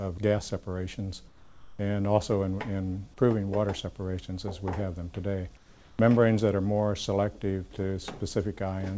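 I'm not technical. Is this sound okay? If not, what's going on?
No, not quite. From 1.28 to 1.79 s and again from 5.57 to 5.99 s, the real background drops out and a flat, slightly quieter hiss stands in. That's comfort noise in place of the background, likely the call pausing transmission during quiet moments.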